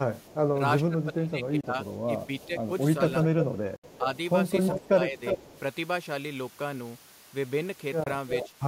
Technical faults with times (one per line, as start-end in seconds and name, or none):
0.21-0.35 echo leak
0.51-2.69 speech suppressed in double talk
1.61-1.64 Bluetooth dropout
2.40-2.47 echo leak
3.24-5.60 echo leak
3.31-4.06 speech suppressed in double talk
3.76-3.84 Bluetooth dropout
4.75-5.41 speech suppressed in double talk
8.04-8.07 Bluetooth dropout
8.28-8.49 echo leak